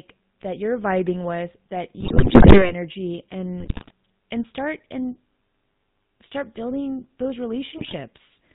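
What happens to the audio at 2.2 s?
At 2.2 s the audio is inside a burst of GSM bit errors running from 2.00 to 2.72 s. Corrupted bits reach the decoder. Its filter, pitch and gain values come out wrong. Each damaged frame gets a bent spectrum or a sudden jump in level. The speech breaks into squawks, pops and gargling. The density of the damage fits an error rate near 7 percent, spread over roughly two dozen frames.

Underneath the burst, the whole clip carries GSM full-rate codec damage, and it is plainly audible. The coder models the vocal tract. It drives that model with regularly spaced pulses and keeps only every third excitation sample. Nothing above 4 kHz gets through. The result is a buzzy, gravelly roughness on the voice. The sound fits the 13 kbps full-rate coder.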